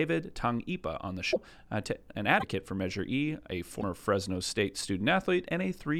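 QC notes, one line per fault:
1.32–1.37 s (just after "on the"), 2.39–2.44 s, 3.80–3.83 s: likely broken MP3 bit reservoir. Audio skips ahead rather than simply dropping out. A brief disturbance follows as frames of about 26.1 ms read another frame's bytes.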